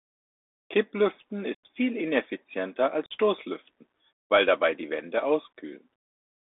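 From start to finish the speech travels over a Bluetooth CVSD headset codec, where each sample becomes a single up-or-down step whose size keeps adapting. The sound fits a 64 kbps CVSD link. Everything is confined to roughly 250 Hz to 3.6 kHz, giving a thin, boxed-in tone. Fast, loud high-frequency movement outruns the step size, so sibilants come out scratchy and distorted. A granular hiss also sits beneath the speech, and that damage is plainly audible.

At 1.55 to 1.60 s, unconcealed Bluetooth headset packet loss drops a run of voice packets, and nothing fills the gap, taking out about 90 ms of audio. The speech breaks off with a hard edge and resumes abruptly, and it comes back briefly quieter as the CVSD step size recovers. A second, shorter loss of the same kind at 3.06 to 3.12 s removes about 45 ms. It leaves another sharp-edged hole with the same clipped restart.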